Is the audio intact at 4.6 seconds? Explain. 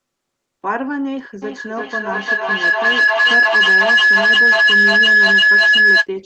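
No. A feedback howl runs from 1.42 to 6.11 s, so 4.6 s falls inside it. Two devices on the same call are sharing a room, and each pass from microphone to loudspeaker and back adds level. The repeats grow instead of dying away and collapse onto a tone of around 1.5 kHz, coming back roughly every 0.4 s and peaking about 12 dB above the speech.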